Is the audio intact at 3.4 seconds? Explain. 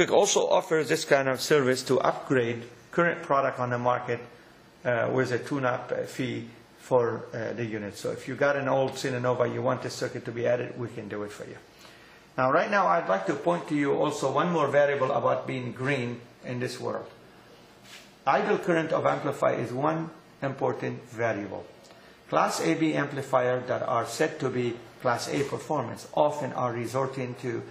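Yes, at 3.4 seconds the sound plays through cleanly, with no dropout, click, glitch or other fault.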